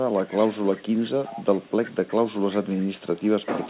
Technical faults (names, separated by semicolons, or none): echo leak